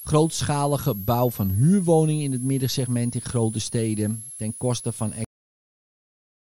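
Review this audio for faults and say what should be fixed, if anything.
A switching supply whistle runs under the speech for the whole clip, a high tone around 10 kHz, wandering between roughly 9.7 kHz and 12 kHz and sitting only about 15 dB below the speech. A switch-mode power supply in the recording chain is running in an audible burst mode, or two supplies are beating, and its switching frequency shifts with load. On a spectrogram it shows as a thin, meandering horizontal line near the top of the speech band. Powering the interface and microphone from a linear or well-filtered supply, or moving the offending adapter off the audio ground, would prevent it.

The clip has a cut-off end at 5.25 s, where the speech stops mid-sound and drops straight to digital silence, which then runs to the end of the file. The final buffers were never written or played out, so the sound has no decay or tail. 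On the waveform the signal ends abruptly with a vertical edge at 5.25 s, followed by a flat line. Letting the recorder flush and close the file properly before stopping would prevent it.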